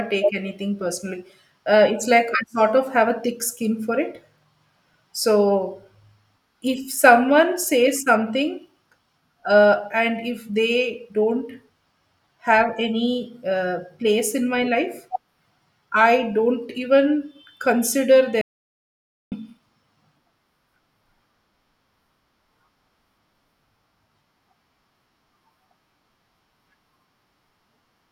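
At 18.41 s, just after "I don't even consider", the speech stops dead and the clip falls into complete silence until 19.32 s, roughly 0.9 s of missing audio. This is an audio dropout to silence: the room tone disappears along with the speech, so the gap is silent rather than a pause. The likely cause is a momentary loss of input, such as a disconnect or mute, while recording continued. Speech resumes abruptly mid-flow.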